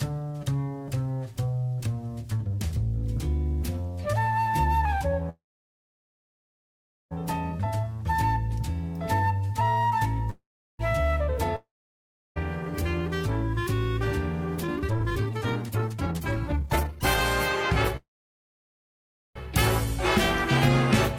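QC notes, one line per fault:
5.29–7.13 s, call audio freeze: the sound stalls and is carried on as a fading buzz, then about 1.7 s of silence, before resuming exactly where it stopped. Nothing is lost, only about 1.8 s of delay inserted, which separates it from a dropout. Likely packets held up in transit and the jitter buffer ran dry.
10.30–10.81 s, call audio freeze: a shorter stall of about 0.49 s, a brief fading hiss then roughly 0.38 s of silence, and the audio picks up with no gap in its content. Likely the same cause, a late batch of packets emptying the buffer.
11.56–12.38 s, long network dropout: a fading buzz then about 0.7 s of silence, but here the audio returns further on, with about 1.2 s of material never heard. That skip forward, not a clean resumption, marks it as lost rather than delayed audio, likely from a network outage.
13.65–17.20 s, jitter buffer speed-up: the sound runs at about 149% pace with pitch unchanged, so it feels hurried rather than chipmunk-like. 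The receiver trims short pitch-period slices over and over to shed the built-up delay, around two seconds in all.
17.97–19.37 s, call audio freeze: another stall of about 1.4 s, with a fading tail and roughly 1.3 s of silence, after which the audio continues from the same point with nothing missing. Likely delayed packets starving the jitter buffer once more.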